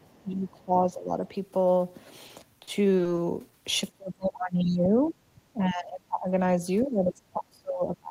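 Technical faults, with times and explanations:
0.0–0.2 s, other side's voice leaking through: a very faint second voice sits far below the main speech, about 35 dB down. This is likely loudspeaker playback picked up by the microphone, which the echo canceller did not fully remove.
0.21–1.24 s, speech suppressed in double talk: the talker's speech dips by as much as about 15 dB for roughly a second. This is likely the echo canceller turning everything down when both sides spoke at once.
2.27–3.19 s, repeated packet loss (robotic sound): six short gaps, the longest 40 ms, are each patched by stretching the preceding sound. About 15% of the span is filled this way, so the speech turns choppy, with small pieces missing.
3.9–6.32 s and 6.82–8.1 s, speech suppressed in double talk: the speech drops by as much as about 25 dB over roughly two seconds in the first stretch, and up to about 30 dB in the second, likely because the canceller could not separate the talker from the far-end echo.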